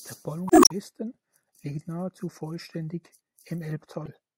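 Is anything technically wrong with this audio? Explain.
Yes. The speech carries two instances of damaged data in a compressed stream, at 0.47 to 0.71 s and at 4.04 to 4.08 s. In each span, bytes in the encoded stream are corrupted, so the decoder misinterprets or rejects the affected frames, loses synchronisation and hunts for the next valid frame header before output resumes. The result is a brief chirp, squawk, click or short hole, longer in the first span than in the short second one.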